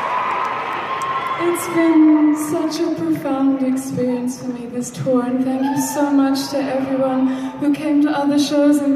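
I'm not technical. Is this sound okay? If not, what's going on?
Yes, this sound is okay. There's nothing wrong with it that you need to worry about.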